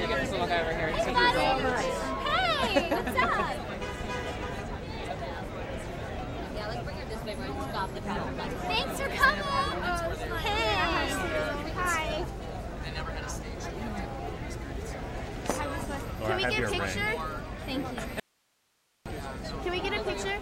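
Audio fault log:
18.20–19.06 s, audio dropout to a faint residue: the sound cuts off abruptly and for about 0.86 s only a thin hiss remains, roughly 40 dB below the normal level, before the signal snaps back. The likely cause is a brief loss of the source while the downstream path stayed live. On the waveform the envelope collapses to a flat noise band with hard edges, and the spectrogram shows a sharp-sided gap filled with faint broadband noise.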